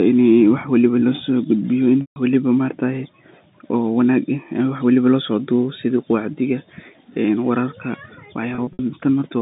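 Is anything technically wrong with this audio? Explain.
Yes. Packet loss with pitch repetition occurs at 2.01–2.16 s and 8.55–8.79 s. The receiver bridged missing audio by repeating the last pitch period. The 150 ms gap becomes a held, buzzy tone fading toward silence. The later 120 ms, scattered over 240 ms, sounds like brief, slightly held, buzzy notes, all through the 150 Hz–3.7 kHz telephone band.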